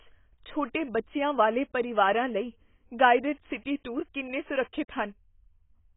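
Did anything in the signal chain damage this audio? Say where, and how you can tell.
Yes, at the codec stage: the speech has likely been through AAC compression, AAC-LC at a very low bitrate, consistent with around 16 kbps. The damage runs through the whole clip and is heavy. Nothing survives above about 3.8 kHz, so the top is cut away and the speech sounds dull and muffled. With so few bits to spread across each frame's spectrum, the encoder discards the upper bands and coarsely quantises the rest, leaving sibilants smeared and a warbling texture on sustained sounds.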